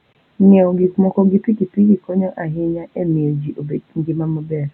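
No technical faults can be heard anywhere in this speech recording.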